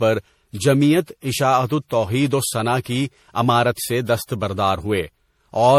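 From start to finish, the speech has that swirly, hollow, smeared quality of generation loss, and there's nothing above about 17.7 kHz. The likely cause is repeated lossy re-encoding, something like seven passes through an MP3-style codec at what sounds like 64 kbit/s. Every pass quantises on a shifted frame grid, so the holes and noise pile up. The result sounds worse than that bitrate alone would give, and consonant attacks go soft and blurry.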